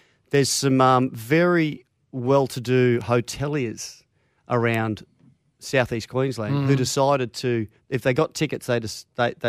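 At 0.35 s, 3.01 s and 4.74 s the speech carries a bit error spike: one flipped bit throws a sample's value off by a power of two before it snaps straight back. The first and third sound like single-sample errors and the second like a short run of about three. Each is a sharp, broadband tick with no relation to the speech. The first two peak at about -20 dBFS, and the one at 4.74 s is louder at about -8 dBFS.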